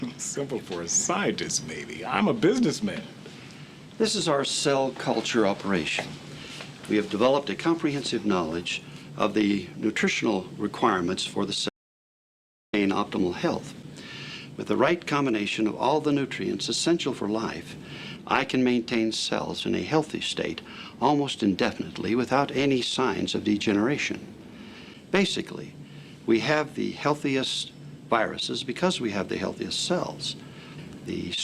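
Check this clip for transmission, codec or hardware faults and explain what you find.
There's one clear problem: an audio dropout to silence from 11.69 to 12.73 s, about 1.04 s long. The sound cuts off abruptly into dead silence with no room tone, then returns mid-flow, most likely because the input link briefly failed while the recorder kept writing silence.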